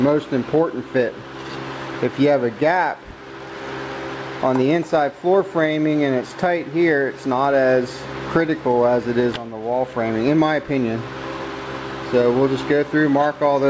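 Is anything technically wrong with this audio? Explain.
No, nothing's wrong here: the sound has come through a call path with a wideband codec, and the top ending around 8 kHz is just what that kind of link normally carries.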